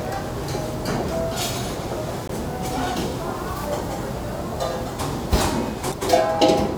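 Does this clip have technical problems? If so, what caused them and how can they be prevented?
Yes. There is damaged data in the compressed stream at 2.26–2.30 s and 5.89–5.94 s, each a glitch of about 40 ms. Corrupted bytes made the decoder misread those frames and lose sync until it found the next valid frame header. Storing and transferring the file with checksums and error checking, and re-fetching any corrupted file or stream segment, would prevent it.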